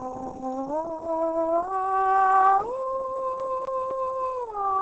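Throughout, the music sounds muffled and hoarse, with nothing above 8.8 kHz. This is likely Opus compression in its speech-oriented SILK mode, fitting a low rate near 16 kbps. A spectrogram shows a flat ceiling at 8.8 kHz. From 3.40 to 4.16 s, the CD is stuck on one turn: a 0.25 s slice repeats three times, each jump marked by a brief mute, visible as identical waveform blocks separated by gaps.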